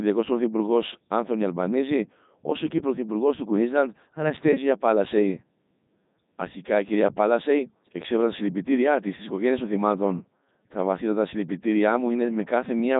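From start to finish the speech carries the Codec 2 vocoder sound: robotic, buzzy and synthetic, with heavy damage and nothing above 3.8 kHz. The decoder rebuilds the voice from sine waves driven by pitch, voicing and a spectral envelope, so the original waveform never survives. The damage level fits Codec 2's top rate of about 3.2 kbit/s. Unlike a merely band-limited or low-bitrate waveform codec, the buzzy, sine-built timbre gives it away.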